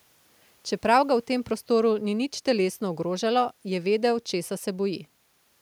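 Nothing technically wrong turns up in this short speech recording; the only thing under the talking is a faint bit of room noise, sitting about 44 dB below the speech, which is just the space the microphone was in.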